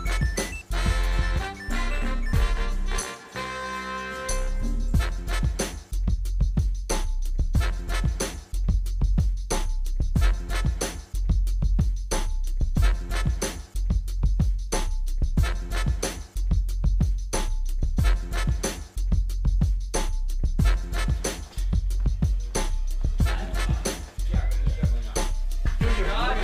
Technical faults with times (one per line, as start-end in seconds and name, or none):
none